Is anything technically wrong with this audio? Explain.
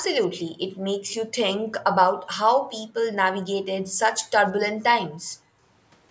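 Yes. The background was gated by the echo canceller: while the far-end loudspeaker played, the canceller clamped the microphone. At 3.86 to 3.90 s the room sound drops out by about 40 dB, and from 5.17 to 5.66 s it sags by about 22 dB for under half a second before returning.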